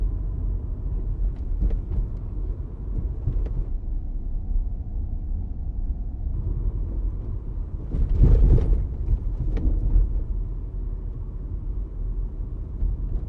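A recording of everyday sounds with a wrong sample rate fault from 3.69 to 6.34 s. The audio runs at 0.726 times normal speed and drops about 5.5 semitones, consistent with 44.1 kHz material played back at 32 kHz without conversion. On a spectrogram, every feature in that stretch slides down in frequency by the same ratio and is drawn out in time, and the waveform's transients spread wider apart.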